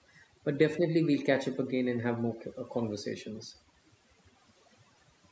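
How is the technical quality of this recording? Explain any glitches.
Technically it's let down by one problem that runs the whole length of this speech clip: overdone noise removal. The noise reducer was set too hard, so it keeps shutting off individual frequency bands that sit close to its noise estimate, and the quieter parts of the voice get caught too. You hear it as a background that drops away and breaks up into little twinkling specks. The call microphone path it went through trims the lowest bass and tops out around 8 kHz, but that's just normal call processing, not a glitch.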